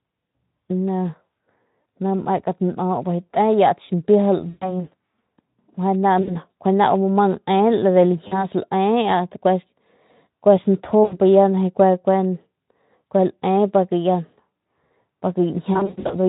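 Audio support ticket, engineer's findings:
VoIP packet loss concealed by the speech codec at 1.81, 4.49–4.89, 6.21–6.33, 8.28–8.47, 11.03–11.18 and 15.73–16.15 s (scattered; longest gap 120 ms). Decoder extrapolating last pitch and filter: buzzy, fading tone, weak recovery. Spectrogram shows smeared flat harmonics and decaying envelope. Light Speex coloration throughout.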